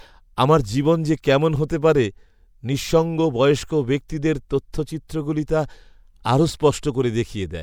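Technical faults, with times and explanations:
4.08 s, pre-echo: a short hiss of about 12 ms leads into a sharp speech onset, because the codec spread the quantisation noise meant for the loud attack across the quiet moment before it. Unlike a click, the noise comes before the attack, and the onset itself sounds softened.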